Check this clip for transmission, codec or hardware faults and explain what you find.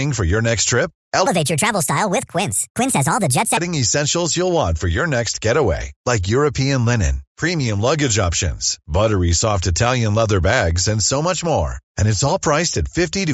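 One fault stands out: a wrong sample rate. From 1.26 to 3.57 s the speech runs fast and high. It plays 1.5 times too quickly, and the pitch rises by about 7 semitones. That fits 16 kHz audio being played at 24 kHz without any rate conversion. Speed and pitch both scale by that 1.5 ratio. The voice sounds squeaky and hurried, then returns to normal pace and pitch after 3.57 s.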